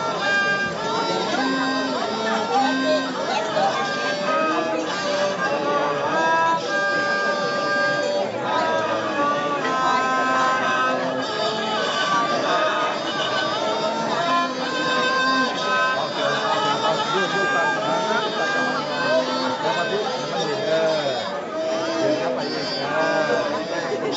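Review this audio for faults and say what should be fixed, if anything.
Nothing here needs fixing: the audio carries the normal signature of a call's microphone processing and a WebRTC call path, with its bandwidth topping out at 8 kHz as that chain would produce.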